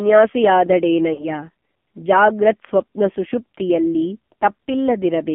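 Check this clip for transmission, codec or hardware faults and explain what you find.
Two faults are present, one throughout and one brief.

AMR narrowband mobile codec, throughout. The speech is squeezed into a 200 to 3400 Hz line band. The codec rebuilds speech from a vocal tract model and sparse pulses. The heavy buzzy, synthetic quality fits a low mode near 5.9 kbps.

Lost AMR speech frames, from 1.14 to 1.25 s. About 40 ms of speech failed its checksum after radio errors, which fits two 20 ms frames. The decoder repeated its last pitch and vocal tract settings at falling gain. The sound smears and dips, then returns rough.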